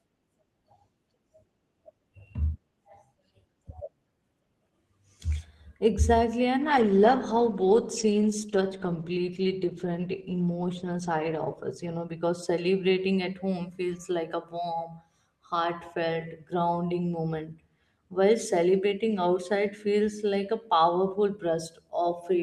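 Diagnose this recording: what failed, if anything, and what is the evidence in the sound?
A call bitrate drop at the network and codec stage: from 6.62 to 12.79 s the bandwidth estimate fell and Opus was forced to code far more coarsely, which fits a fall from about 32 to 13 kbps. Speech turns rough and watery, worst for nearly 5 s.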